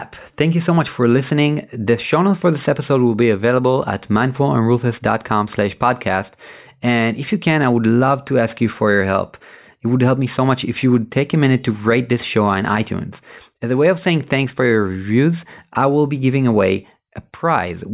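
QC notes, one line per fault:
No technical faults turn up anywhere in this speech recording, and the signal holds a steady, intact state with nothing to flag.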